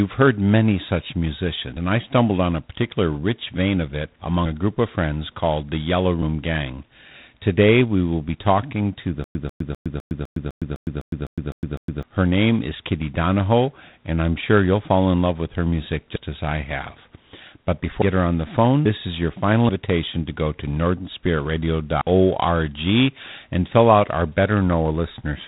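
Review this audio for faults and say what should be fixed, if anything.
G.726 ADPCM coding at 24 kbit/s runs through the whole recording. Each sample carries only a coarse difference from a predicted value, so a harsh, rasping hiss rises and falls with the speech level. A spectrogram shows everything cut off sharply at 3.9 kHz and a grainy noise floor that fills the gaps between formants. To prevent it, capture or route the audio at 32 kbit/s or higher, or use a wideband codec.

A dropped buffer (overrun) shows up as an abrupt skip at 1.77 s, between "heard many such" and "and I stumbled on", and at 16.16 s, between "love with her music" and "as I have". Each loses about a tenth of a second. Larger skips of about 0.3 s occur at 18.86 s and 22.01 s. The likely cause is that the recording software did not read the hardware buffer before it was overwritten. A waveform shows a discontinuity with no silence at each splice. 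To prevent it, enlarge the input buffer or give the capture thread higher priority.

A stutter with silent gaps starts right after "be talking to the" and lasts from 9.24 s to 12.03 s. A 144 ms fragment replays 11 times, and each replay is followed by 109 ms of digital silence, giving an even 253 ms cycle. The likely cause is a stalled stream that re-plays its last fragment on every retry. A waveform shows identical blocks separated by flat lines, and a spectrogram shows repeating vertical stripes. To prevent it, add jitter buffering and conceal stalls instead of looping the last packet.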